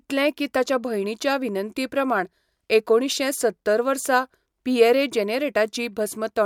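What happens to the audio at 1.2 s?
Nothing goes wrong at 1.2 s; the speech plays through that moment intact, with no dropout, click, distortion or glitch.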